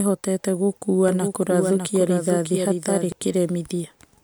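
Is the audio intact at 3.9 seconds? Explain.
Yes, at 3.9 seconds the speech plays through intact, with no dropout, click, distortion or other fault at that moment.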